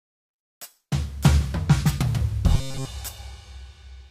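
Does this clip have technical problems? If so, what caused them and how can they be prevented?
Yes. Robotic sound from repeated short buffers occurs from 2.55 to 2.85 s, where the music turns into a rigid, metallic buzz at 134 Hz. The likely cause is audio arriving too seldom, so playback loops a roughly 7.5 ms segment and skips most of the real material. It can be prevented by giving audio processing higher priority and a larger buffer so new data always arrives in time.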